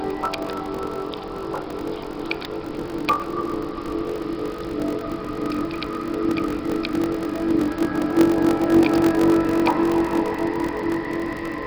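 From the first moment to the end there's a block size mismatch, padded type. One stage is handing over shorter blocks than the next one reads, and each block gets topped up with zeros. That silent sliver repeats at about 46.9 Hz, giving a steady low buzz, which fits a 1024-sample read block. Because of the padding, the sound also runs at about 0.86 times its proper speed while keeping roughly its normal pitch.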